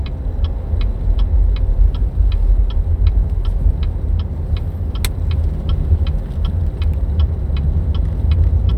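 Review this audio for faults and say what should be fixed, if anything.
Nothing stood out on listening, so there is nothing here that needs fixing.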